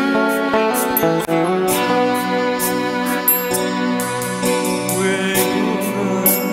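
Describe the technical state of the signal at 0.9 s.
At 0.9 s the signal is intact, with no audible fault at that moment.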